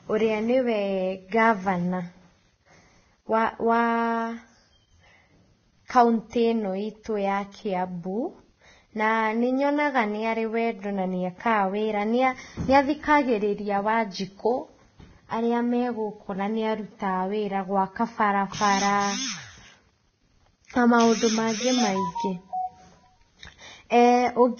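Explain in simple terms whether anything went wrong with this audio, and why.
Throughout the speech there is heavy, hissy, grainy damage, and nothing is heard above about 6.5 kHz. This points to Vorbis compression, likely at a low setting: the encoder cuts the treble and quantises what remains so coarsely that fine detail turns into noise.

Pre-echo occurs twice, at 6.30 to 6.33 s and at 23.90 to 23.92 s. The codec spreads its noise across a whole block, so a short hiss, about 27 ms and 20 ms long, comes just before a sharp onset and softens it.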